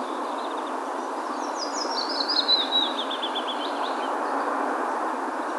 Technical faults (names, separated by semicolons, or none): none